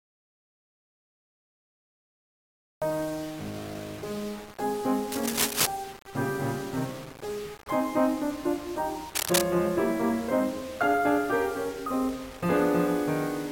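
From the very start until 2.82 s the music is absent in an audio dropout to silence: the input was likely lost while recording carried on, so the waveform is a flat line and the spectrogram is blank, with no room tone, until the sound arrives mid-flow.

Throughout the clip there is low bit depth without dither. The music was likely rounded to very few steps, around 6 bits, so grainy distortion tracks every note and decay, sitting roughly 20 dB down. The waveform shows visible staircase steps, and the spectrogram shows harmonic-laden hash that follows the music.

Cable scratch noise appears from 5.12 to 5.67 s and again from 9.15 to 9.42 s. A worn cable or connector being moved likely caused the rapid contact changes. Each burst is dense, uneven scratching about as loud as the music. It shows as ragged spikes on the waveform and broadband vertical smears on the spectrogram.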